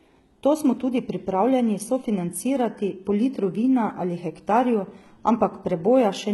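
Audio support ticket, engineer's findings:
Speech sounds gritty and lispy through the whole clip. Sibilants come out metallic rather than clean. Treble sounds synthetic, and nothing reaches above 11.8 kHz. Damage is heavy throughout. Likely component: HE-AAC compression at a very low bitrate, around 16 kbps by the sound of it. Mechanism: the codec keeps only the lower spectrum and rebuilds the top by copying lower bands upward. Harmonics then fail to line up across the crossover.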